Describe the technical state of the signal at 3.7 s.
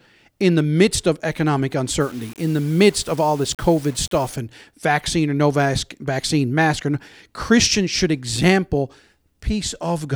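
At 3.7 s the speech carries low bit depth without dither, from 2.01 to 4.36 s, between "the midst of economic" and "and vaccine or no". It likely comes from rounding to about 7 bits, leaving grainy distortion roughly 25 dB below the signal that rises and falls with the voice rather than sitting as steady hiss.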